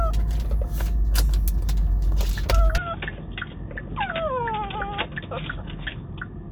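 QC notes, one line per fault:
2.78–6.51 s, input switched to a poorer device (likely): sound turns dull and boxy with no gap, nothing above 3.6 kHz, level drops around 10 dB, faint new noise floor.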